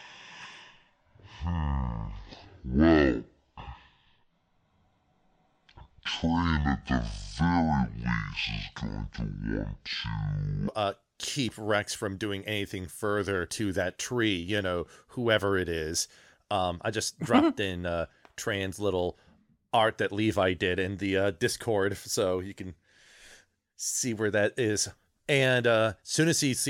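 A section at the wrong speed runs from 0.0 to 10.68 s of this speech recording: it plays at half speed, so the voice is slow, drawn out and roughly ten semitones lower, likely because that stretch was played against a clock running at half the correct rate. Truncation distortion on a fade appears from 26.45 s to the end, where the smooth fade-out beginning near 26.5 s loses resolution. With too few bits and no dither, consistent with a 9-bit stage, the tail turns into coarse steps and sounds gritty.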